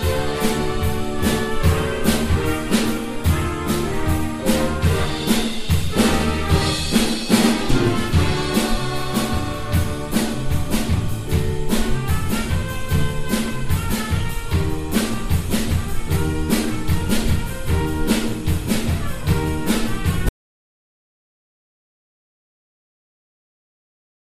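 At 20.29 s the input signal was likely lost, through a disconnected device, failed link or mute, while the recorder kept writing silence. This audio dropout to silence cuts the sound off mid-flow, and the final 4.0 s are dead silence without room tone.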